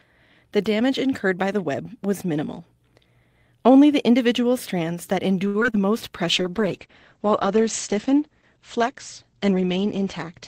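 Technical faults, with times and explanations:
5.47–5.75 s, repeated packet loss (robotic sound): right after "the individual strands that", four gaps (longest 69 ms) are patched by extending earlier sound, giving choppy repetition rather than one dropout.
5.86–6.50 s, jitter buffer slow-down: repeated pitch periods add 41 ms, so speech drags at 95% speed with unchanged pitch; nothing is lost, unlike packet loss.
6.28 s to end, call bitrate drop: the encoder falls from 32 to 10 kbps and bandwidth narrows from 20 kHz to 8 kHz, adding coarse coding roughness, not just muffling, with no recovery.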